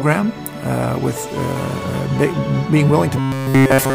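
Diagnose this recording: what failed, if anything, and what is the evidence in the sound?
Buffer-stage robotic sound from repeated short buffers: from 3.19 s onward, a rigid 134 Hz buzz, likely a starved buffer looping chunks of about 7.5 ms.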